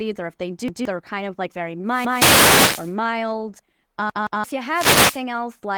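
Repeated buffers at 0.68 to 0.85 s, 2.05 to 2.22 s and 4.10 to 4.44 s break up this speech clip. Each time, fresh audio failed to reach the output in time, so the last block of about 171 ms played again, a length that fits an 8192-sample buffer. The first two repeat once and the third twice, giving a hard-edged stutter and swallowing roughly 150 ms, then about 300 ms, of the real sound. Wireless microphone noise hits from 1.87 to 2.95 s and 4.69 to 5.23 s come from the FM link fading as radio reflections cancel, letting receiver hiss swell into a swish of static over the speech. The first one overlaps the second stutter. The light Opus voice compression, in hybrid mode at 20 kbps, leaves only faint coding texture beneath these faults.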